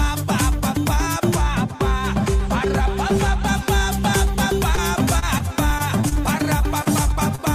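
From 1.36 to 3.48 s, de-emphasis was applied wrongly: a treble-cutting filter hit a signal that needed no correction, tilting the response down so 10 kHz sits about 10 dB below 1 kHz. The audio turns dull and muffled, as if behind cloth.

Between 4.75 and 6.13 s, repeated packet loss leaves six separate holes, the longest 28 ms and together about 120 ms of missing audio. Each is patched by stretching the preceding sound, so the passage turns choppy, with fragments dropping out.

Overlapping this, from 5.48 to 7.41 s, a jitter buffer slow-down occurs: the receiver rebuilt its reserve by repeating tiny slices of waveform, adding 48 ms. Playback runs at 98% speed with pitch unchanged, so sounds drag slightly and can waver.

Two short concealed packet losses follow, at 6.84 to 6.87 s and 7.35 to 7.40 s, each about 20 ms never arriving in time. The gap is filled by extending the last sound and blending back, heard as a brief smear or wobble.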